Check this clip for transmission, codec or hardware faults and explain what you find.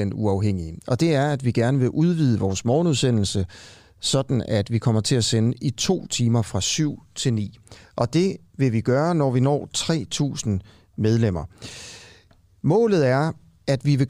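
No transmission, codec or hardware faults can be heard anywhere in this speech recording.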